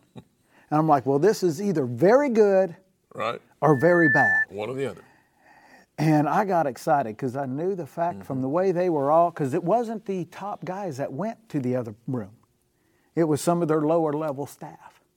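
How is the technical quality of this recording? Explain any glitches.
The recording has one clear glitch: a burst of loudspeaker feedback squeal. It runs from 3.64 to 4.46 s. A microphone is picking up a loudspeaker that carries its own signal. At 1.8 kHz the loop gain climbs past one, so that frequency keeps feeding itself. It is heard as a single piercing tone. It swells over roughly 0.4 s and peaks a few decibels above the speech.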